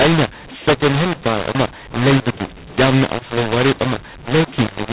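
From start to finish, the speech has a mu-law and A-law mix-up: mu-law telephone audio decoded as A-law scrambles levels, so it's harsh and gritty and pauses hiss.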